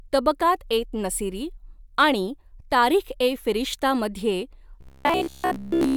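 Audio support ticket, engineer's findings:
Robotic sound from repeated short buffers, 4.81 to 5.96 s, directly after "आणि तारीख ए फिरिश्तामध्ये". Speech collapses into a rigid metallic buzz at 66.8 Hz, loosely tracking the words. The buzz period fits a buffer of about 15 ms being replayed while fresh audio arrives too late, so most of the real signal is skipped. Likely cause: playback buffer underrun in the device or driver path.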